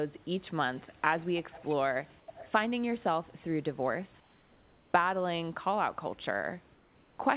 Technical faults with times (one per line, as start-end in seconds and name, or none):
0.18-0.27 echo leak
0.74-2.52 echo leak
4.20-4.94 comfort noise in place of the background
6.74-7.18 comfort noise in place of the background